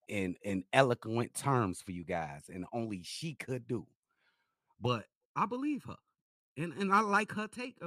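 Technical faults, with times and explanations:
4.86 s to the end: channel delay (comb filtering). One channel lags by roughly 0.7 ms, so the mono sum cancels at evenly spaced frequencies from around 700 Hz upward, making the speech hollow and phasey. A spectrogram shows fixed, evenly stacked dark horizontal notch bands.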